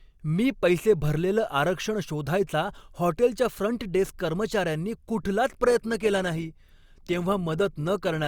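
At 5.65 s the adaptive stream switches to a lower bitrate because the connection slows, and it stays there to the end of the clip. The sound points to an Opus stream stepping down from around 64 kbit/s to around 24 kbit/s. The change is abrupt but leaves no gap. From that point codec artefacts rise, with nothing above about 20.4 kHz.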